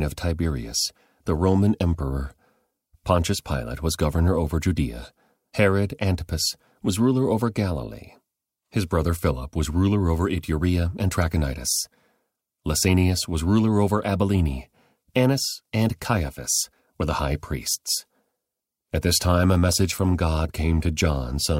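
No technical faults can be heard anywhere in the recording.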